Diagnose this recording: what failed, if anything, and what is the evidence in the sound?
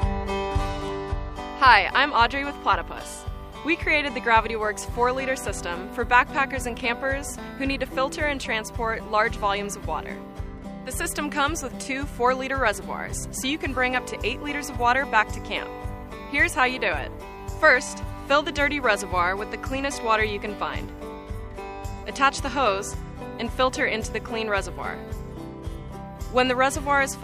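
Nothing failed in this recording. No stage of the chain, from the analogue side through to playback, leaves any audible evidence of a problem.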